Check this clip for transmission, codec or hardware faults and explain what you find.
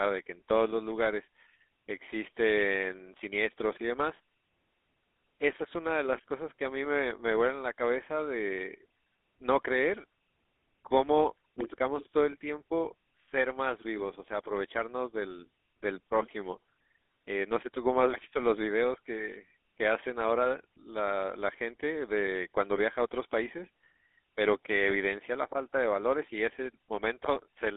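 One codec fault runs through the whole clip. GSM full-rate codec, throughout: the speech is modelled as a vocal-tract filter driven by sparse, regularly spaced pulses, which fits a 13 kbps coder. This gives a plainly audible buzzy, gravelly roughness within a narrow band from 250 Hz to 3.6 kHz.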